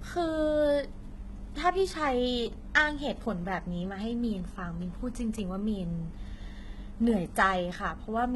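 From start to finish the speech carries heavy damage from HE-AAC compression, likely at a very low bitrate that fits about 16 kbps. Only the lower spectrum is properly coded. The treble is rebuilt by copying lower bands upward and shaping them with a coarse envelope, so its harmonics don't line up with those beneath. S sounds come out gritty, metallic and lispy. A spectrogram shows a hard ceiling at 11.8 kHz, with smeared, repeated-looking texture above the crossover.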